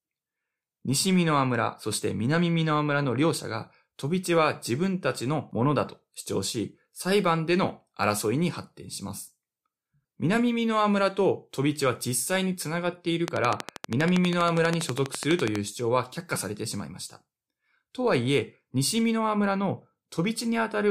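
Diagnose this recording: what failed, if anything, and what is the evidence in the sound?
A train of clicks runs from 13.28 to 15.57 s: around thirty near-identical pulses at a steady 12.3 per second, standing well above the speech and audible in its pauses. The fixed shape and rhythm, unlike random crackle, point to interference or a struggling interface as the likely stage.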